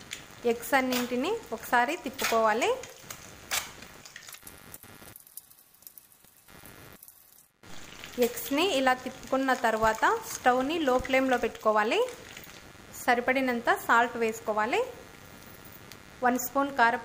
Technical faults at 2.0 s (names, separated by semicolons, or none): computer activity noise